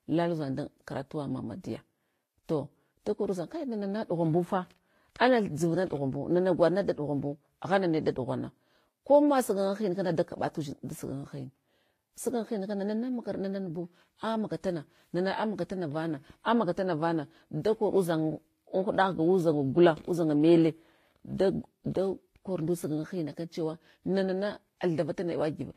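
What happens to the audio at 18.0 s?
At 18.0 s the speech carries the same layered damage heard throughout, likely from transcoding between lossy codecs: smeared, warbly, metallic detail as each encoder compounds earlier artefacts. A spectrogram shows a hard ceiling at 14.9 kHz, with patchy, blocky upper bands beneath it.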